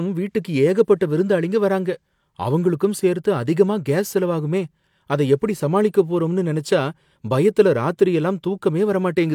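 No technical faults detected.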